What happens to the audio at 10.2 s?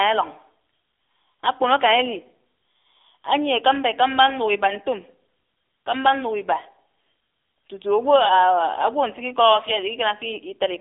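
At 10.2 s you're hearing the AMR narrowband mobile codec, which runs through the whole clip rather than starting there. The speech is squeezed into a phone-line band of roughly 300 Hz to 3.7 kHz, with nothing above 3.7 kHz. The codec rebuilds the voice from a vocal-tract model fed by sparse pulses, and at this density that leaves a plainly audible buzzy, synthetic edge, which fits a low 7.4 kbps mode.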